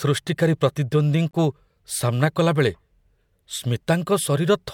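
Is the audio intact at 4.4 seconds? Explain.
Yes, at 4.4 seconds the speech runs cleanly, with no dropout, click, distortion or other fault audible at that point.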